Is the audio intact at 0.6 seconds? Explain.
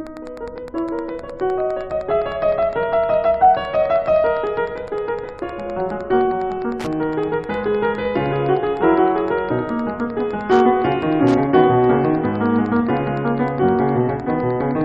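No. At 0.6 s the music carries Wi-Fi interference, which runs through the whole clip. A nearby Wi-Fi radio's transmissions are picked up and rectified by the audio circuit, so its beacon, repeating every 102.4 ms, becomes a steady tick about ten times a second, sitting roughly 25 dB below the music. That slow, regular ticking separates it from mobile-phone interference, whose much faster bursts fuse into a continuous buzz rather than distinct clicks.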